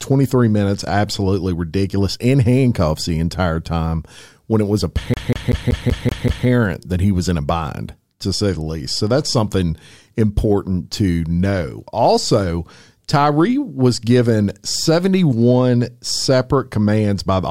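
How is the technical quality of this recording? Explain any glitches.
One glitch mars this speech recording. CD stuck on one turn, 5.14 to 6.47 s, after "time when it was": the laser skips back, so a 0.19 s fragment repeats seven times with brief mutes before "that he was in".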